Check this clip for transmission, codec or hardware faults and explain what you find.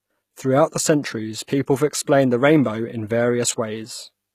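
Two faults are audible in this speech clip.

Throughout, the treble is gritty, and s sounds come out metallic and lispy, with nothing above 14.9 kHz. This is likely HE-AAC compression, at a rate that suggests around 20 kbps. Only the lower spectrum is coded, and the upper bands are copied up from it, so their harmonics fail to line up.

At 1.47 s a sharp attack is preceded by a brief hiss, about 15 ms long, and the onset sounds softened. This is pre-echo: the codec spread quantisation noise sized for the loud attack across its whole block, including the quiet moment just before it.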